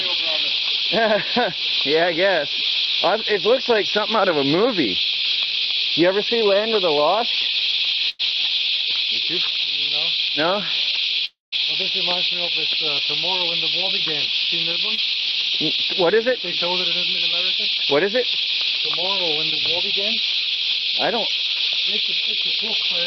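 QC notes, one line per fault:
8.09–8.21 s, burst of packet loss: the sound stalls into a held, fading continuation of itself, then jumps ahead. About 100 ms of audio never arrived, and the receiver stretched the last sound across roughly 97 ms before resuming further on, with that stretch gone.
11.25–11.54 s, long network dropout: the last sound smears on as a decaying buzz or hiss, falls to about 160 ms of silence, then returns past the missing part. The likely cause is that roughly 280 ms of audio was lost in transit, with about 270 ms concealed before it died away.
14.95–14.99 s, short concealed packet loss: a brief smear or wobble. About 20 ms failed to reach the decoder in time, so it extrapolated the preceding sound for roughly 24 ms and blended back into the real audio.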